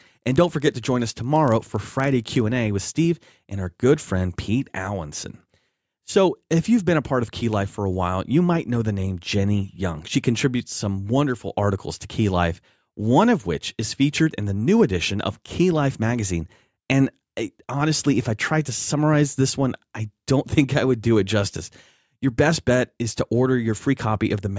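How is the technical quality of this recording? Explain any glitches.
For the first 2.4 s, from 0.0 to 2.4 s, the speech carries a rough buzz made of ticks at a steady 25 Hz. It sounds only while the voice is present. This is a resampler restarted on every block. The sample-rate conversion, which sounds like a step down from 48 kHz to 16 kHz, handled each 40 ms block in isolation, without the neighbouring samples at its edges. Each block boundary leaves a small error, and those errors repeat 25 times a second.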